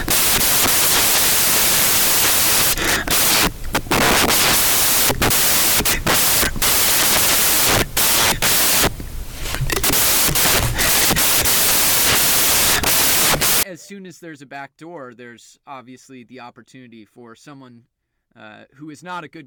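Samples built from the wrong bytes run from 0 to 13.63 s: each sample's bytes are combined in the wrong order or alignment, so the rapidly changing low bits dominate. The speech turns into loud, harsh broadband noise, close to white on its louder sounds.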